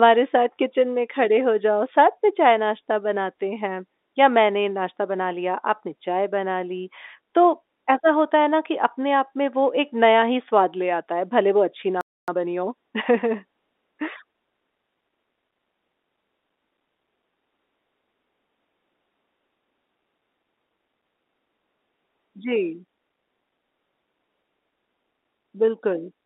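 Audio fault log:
12.01–12.28 s, playback stall: the player likely ran out of data or was blocked, so the speech drops to silence for 0.27 s, then resumes.
12.28–13.34 s, time-compressed catch-up: the player trims its backlog by cutting and cross-fading small slices, hurrying the speech to 1.25 times normal speed, same pitch.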